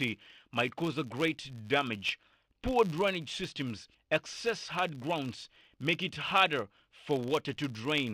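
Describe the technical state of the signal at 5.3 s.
At 5.3 s the speech carries a filter restarted on every block fault, present across the whole clip. The filter loses its state at each block boundary and starts from silence, so every 10 ms block opens with a small transient, heard as a 100 Hz buzz that tracks the speech level.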